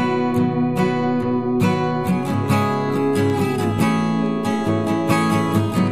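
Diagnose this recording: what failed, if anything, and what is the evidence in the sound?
Word clock ticks point to a digital interface fault. Sharp ticks recur about once a second from 0.42 s to 5.22 s, around seven in all. The receiver runs on its own clock. Each slip drops or repeats one sample, which fits a drift of roughly 20 ppm.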